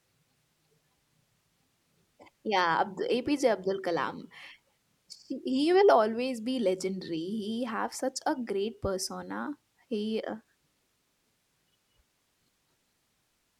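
No technical faults can be heard in this speech recording. Nothing in the audio chain calls for comment at any point.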